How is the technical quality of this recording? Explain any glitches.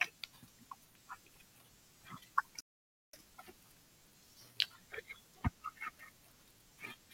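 There's one glitch in this speech clip, a playback stall. From 2.61 to 3.13 s the sound just drops out for about half a second, then carries on. That's likely the player running dry of data or its thread getting blocked, so output went silent until it caught up.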